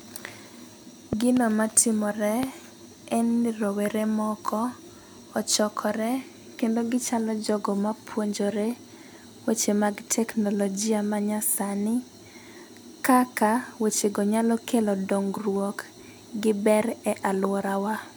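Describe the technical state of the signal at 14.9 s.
At 14.9 s the signal is intact, with no audible fault at that moment.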